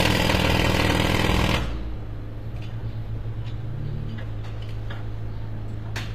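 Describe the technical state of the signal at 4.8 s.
At 4.8 s, as throughout, the treble sounds gritty and metallic, likely from HE-AAC compression, where spectral band replication rebuilds the highs from copied lower bands. Unlike a plain low-pass, the top stays bright up to a hard 15.4 kHz ceiling, and the damage fits a bitrate near 24 kbps.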